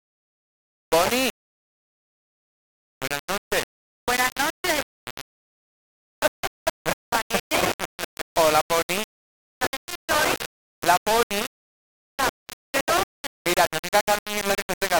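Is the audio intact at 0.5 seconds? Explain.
No. At 0.5 seconds, as throughout the clip, quiet sounds turn grainy and gritty, or dense passages carry a near-steady hiss, with error nearly as loud as the signal. The likely cause is low bit depth without dither: rounding to 3 bits.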